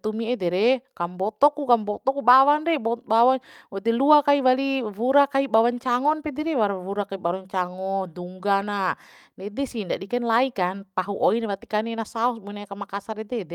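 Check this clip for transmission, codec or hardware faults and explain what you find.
No transmission, codec or hardware faults are audible anywhere in this speech recording.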